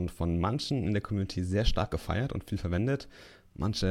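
No technical faults can be heard anywhere in it.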